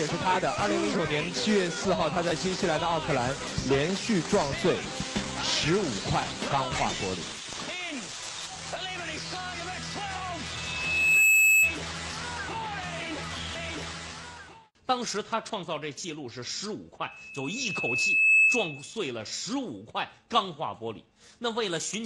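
A microphone picking up its own loudspeaker drives the loop past unity gain at 2.6 kHz, causing loudspeaker feedback squeal at 10.55–11.80 s and 17.02–18.95 s. Each time a single piercing tone swells over the sound, quickly in the first and more gradually in the second.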